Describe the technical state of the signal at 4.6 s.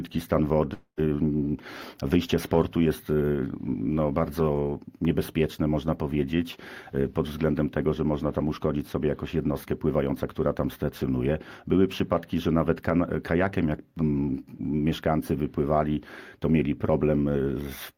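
At 4.6 s the signal is intact, with no technical fault audible at that moment.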